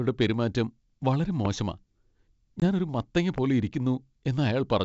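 A speech recording carried over what sounds like G.722 wideband telephone coding, with clear band-limited audio consistent with 64 kbit/s. Two loud pops stand out, each a single sharp pulse about 15 dB above the speech. The first is at 1.45 to 1.48 s, after "പെരുമാറ്റം വളരെ". The second is at 3.38 to 3.40 s, after "ഞാൻ ഒരു മത്തങ്ങ". A voltage spike from a switch, plug or static is the likely cause. There is also packet loss on an ADPCM call at 2.60 to 2.63 s, just before "ഞാൻ ഒരു മത്തങ്ങ". A 20 ms hole drops out, which fits one lost packet. The decoder's predictor then briefly mistracks, so the sound resumes slightly distorted.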